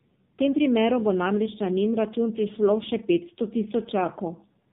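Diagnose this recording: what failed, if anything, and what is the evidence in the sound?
Tandem speech coding failed at the codec stage. Across the whole clip the speech is rough, muffled and warbly, with nothing above 3.7 kHz. This fits two speech-codec passes in a row, likely AMR-NB at each end with a G.711 hop between, each re-encoding already degraded speech.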